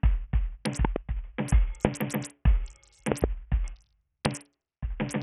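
Throughout the music, the sound is dull and gritty. Nothing is heard above 14.4 kHz. The treble flickers, and a rough grain and aliasing ride on it. This heavy damage is likely Bluetooth SBC compression at a very low bitrate, around 48 kbps.

Loud pops cut through the music four times. Two come in quick succession between 0.85 and 0.98 s, about 15 dB above the music. Single pops follow at 1.85 to 1.87 s and 4.26 to 4.28 s. Another pair falls between 3.12 and 3.26 s. These later pops reach about 20 dB above the music. Each is a sharp, brief crack, and the music carries on underneath. The likely cause is a sudden voltage step or pulse, such as from a switch, static or a driver glitch.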